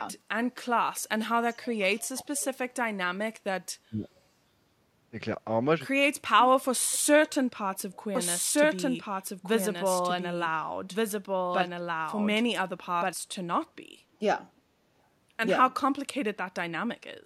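Right at the start there's an echo leak: faint copies of the voice trailing about 393 ms behind, at 0.95 to 1.01 s, 1.52 to 1.66 s and 1.97 to 2.45 s, then again at 7.75 to 7.98 s, sitting roughly 25 to 35 dB under the speech. Most likely a loudspeaker on the far end whose echo canceller let some pickup slip back.

Overlapping that, at 2.14 to 2.30 s and again at 3.89 to 4.08 s, you get speech suppressed in double talk. The voice ducks by around 20 dB for a fifth of a second or less, likely the canceller clamping down on both talker and echo while both sides were sounding.

Then from 8.15 to 13.13 s there's a doubled audio track. A second, full-band copy of the voice runs roughly a second and a half behind at about the same level, dry with no room tail, and it switches in and out abruptly. Likely a second, slower capture path or an edit holding two copies out of step.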